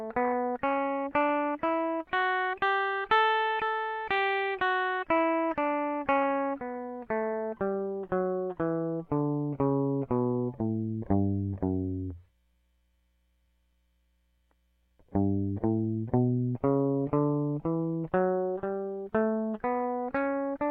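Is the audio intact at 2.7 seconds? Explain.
Yes, the music plays through 2.7 seconds intact, with no break, click or distortion at that point.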